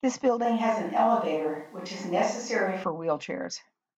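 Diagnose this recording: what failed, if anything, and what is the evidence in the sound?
From 0.45 s to 2.84 s the speech turns abruptly roomy and hollow with thinner bass, then snaps back; level barely changes and room noise sits roughly 40 dB down. At the capture stage, this is likely a switch to a distant microphone. A spectrogram shows reduced low end and reverberant smearing between syllables across that span.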